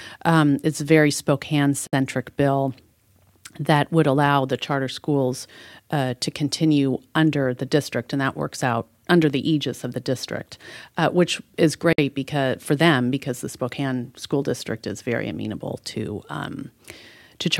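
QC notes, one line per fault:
1.87–1.93 s and 11.93–11.98 s, gap at a join of encoded pieces: silences of 60 ms and 54 ms, ten seconds apart, the second between "district uh which is" and "because for them because." Untrimmed encoder delay and last-frame padding leave abrupt dropouts with smeared edges.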